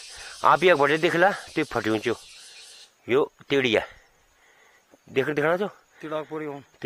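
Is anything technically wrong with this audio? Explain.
No, nothing technically wrong can be heard in this audio. There are no faults to point to at any moment.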